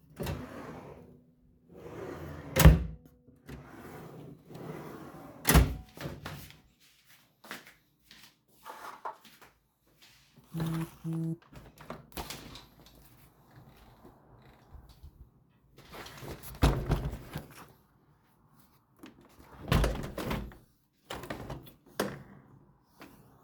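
Nothing here catches the ear as a technical problem; the sounds in this recording come across steady and intact all the way along.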